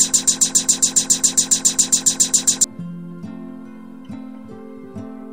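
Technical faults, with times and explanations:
0.00–2.64 s, broken-record loop: The clip opens already stuck. A 137 ms fragment repeats exactly, back to back, 18 times. A stalled player, encoder or stream likely kept resending its last piece. The audio meant for that span is lost.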